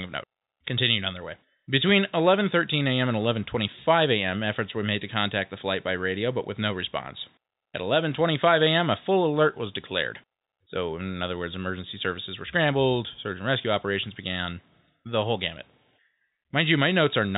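Speech, with no technical faults to report.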